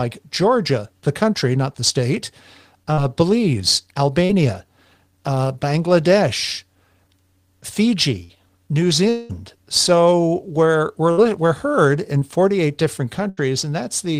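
At 2.93 to 2.99 s and again at 4.25 to 4.31 s there is short concealed packet loss. About 40 ms of the stream arrived too late each time. The decoder extended the preceding sound and blended back. Each gap is heard as a brief smear or wobble.

From 8.23 to 8.31 s comes a burst of packet loss. About 60 ms went missing in a row. The gap is filled by continuing the last sound while it fades, giving a held buzz or fading hiss. The audio then resumes further on.

From 9.09 to 9.31 s the sound breaks up for about 200 ms, likely a long network dropout. The last sound is stretched into a fading buzz or hiss across the whole gap. No silence follows. The audio returns later, without that stretch.

Two more bursts of packet loss follow. They fall at 11.11 to 11.19 s, about 60 ms, and at 13.29 to 13.39 s, about 80 ms. Between them, at 12.19 to 12.23 s, a 20 ms short concealed loss leaves a brief smear.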